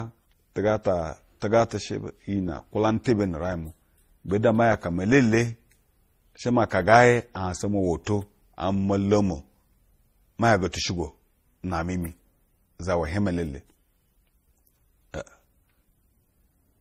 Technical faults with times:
0.00-16.81 transcoding between lossy codecs

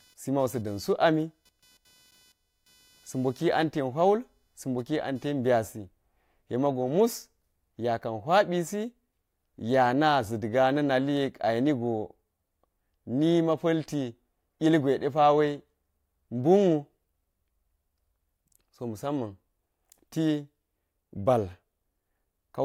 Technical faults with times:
0.00-5.63 computer activity noise

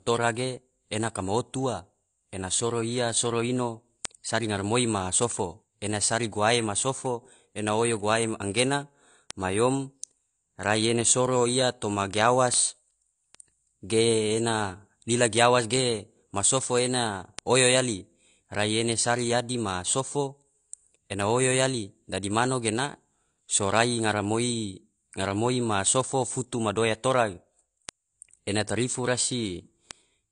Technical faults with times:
0.00-30.31 AAC compression
0.42-30.31 word clock ticks

